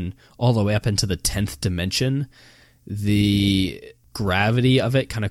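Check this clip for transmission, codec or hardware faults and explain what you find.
No faults can be heard in this speech recording.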